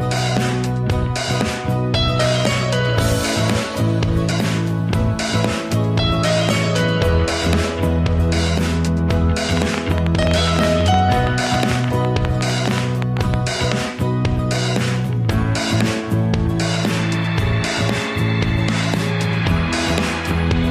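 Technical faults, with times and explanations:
4.30 s and 10.24 s, compressed frames skipped: The decoder lost whole blocks of compressed audio, either because they were absent or because it rejected them as corrupt. At 4.30 s roughly 150 ms of sound is missing, consistent with around seven frames. At 10.24 s, inside the click run, about 70 ms is missing, fitting roughly four frames. Each time the sound leaps forward.
9.57–13.35 s, train of clicks: A repeated impulse, likely from electrical interference or a faulty connection, was added on top of the signal. About thirty near-identical clicks arrive at an uneven pace averaging around 8 per second, peaking roughly 15 dB above the surrounding sound. They come through as irregular ticking and popping over the audio and stay audible in quieter moments as well.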